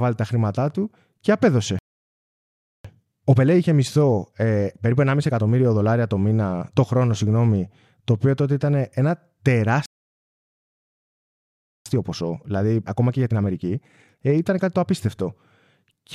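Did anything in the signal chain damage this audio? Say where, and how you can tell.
Yes. Speech cuts to silence after "τα χρήματά του και" from 1.79 to 2.85 s and again from 9.86 to 11.86 s: playback stalls, likely from a starved buffer or blocked player thread.

After each gap there is time-compressed catch-up. Speech hurries at normal pitch, 1.15x from 2.85 to 5.85 s (up to "το μήνα το χρόνο") and 1.25x from 11.86 to 14.86 s. The player is trimming its backlog with cross-faded cuts.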